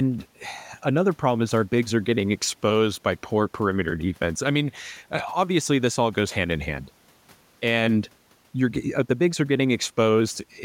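No technical faults can be heard anywhere in this speech recording. There is nothing in the signal to mark with a time or trace to a cause.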